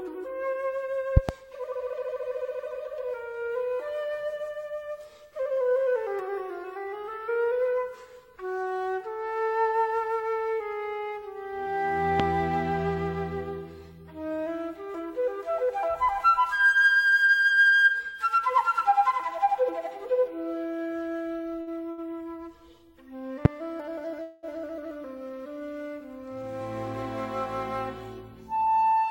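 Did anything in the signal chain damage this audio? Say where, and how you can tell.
Yes. Loud pops sit on top of the audio at three points: a pair in quick succession between 1.17 and 1.32 s, then single ones at 12.2 s and 23.45 s. The first two peak about 20 dB above the signal and the last about 25 dB. The underlying sound carries straight on beneath each one. That points to the analogue wiring or the driver, with the likely cause being a voltage step from a connector, switch, static discharge or driver glitch.

Two short stalls from a late packet occur close together in the network and jitter-buffer path, at 21.61 s and 21.91 s. In each, the last bit of sound is held and stretched instead of moving on, for 54 ms and then 69 ms. Nothing is skipped afterwards. The buffer ran dry, the receiver filled the wait, and playback resumed from the same point, adding that delay.

A longer call audio freeze follows from 24.22 to 24.45 s. 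The sound stops progressing and is carried on as a fading continuation of the last moment for about 211 ms, without dropping to silence. It then picks up exactly where it paused, so a gap has been inserted and no content has been lost. The likely cause is packets held up in the network long enough to empty the receiver's buffer.

From 28.51 s to the end, the audio runs roughly 10 percent fast at unchanged pitch and sounds hurried. This is a jitter buffer speed-up. After the earlier delays, the receiver was holding more audio than its target, so it trimmed short pitch-period slices repeatedly, about 70 ms in total, to pull latency back down.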